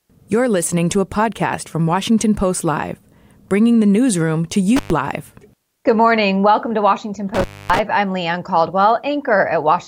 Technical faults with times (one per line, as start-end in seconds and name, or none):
4.76-4.91 intermittent contact
7.35-7.79 intermittent contact